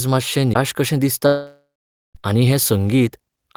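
A CD skip at 0.54 s is heard as a very brief mute in the speech, after which playback resumes from a different point on the disc. A knock or a surface flaw has thrown the laser off its track onto another turn of the spiral, so the player loses its place, silences the output for a moment, and picks up the audio from wherever the laser has landed.

A long network dropout runs from 1.27 s to 2.17 s. The speech gives way to a buzzing, hissy continuation of the last sound that fades away, leaving about 0.49 s of silence before the speech returns. About 0.88 s of the audio never plays. The likely cause is that no packets reached the receiver for that stretch, so it filled the gap by extending the final sound until it ran dry, then rejoined the stream further on, with the lost portion gone.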